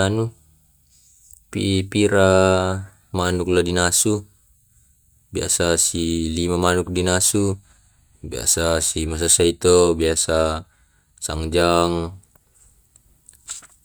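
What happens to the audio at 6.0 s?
At 6.0 s the speech carries on without any audible fault; there is no dropout, glitch, clipping or distortion at that moment.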